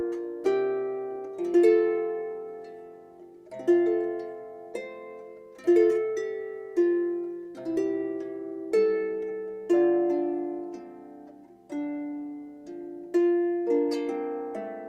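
No technical fault can be heard anywhere in this audio. Nothing in the sound points to a problem in how it was captured, carried or stored.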